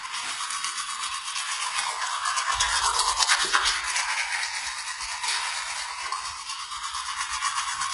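From start to finish, the audio carries heavy HE-AAC compression damage. The lower spectrum is coded. The treble is not genuine. Above a crossover it has been rebuilt from copied lower bands, so the harmonics fail to line up. Sharp, hissy detail turns gritty and metallic. Nothing remains above about 11.1 kHz. The likely cause is HE-AAC v2 at a very low bitrate, which fits roughly 12 kbps.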